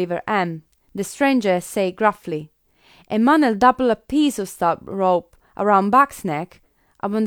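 No technical faults can be heard in this recording.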